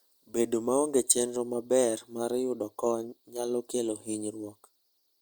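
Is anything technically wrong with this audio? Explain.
No, nothing technically wrong can be heard in this speech recording; the signal stays continuous and stable throughout.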